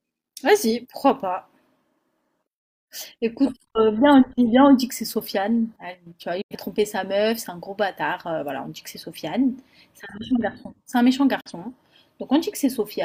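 Digital broadcast dropouts cut this speech clip at 6.41 to 6.55 s and 11.41 to 11.52 s. Each time the receiver quickly fades out over about 8 ms and mutes until clean frames return, losing roughly 85 ms and 43 ms of programme, consistent with two frames and then one.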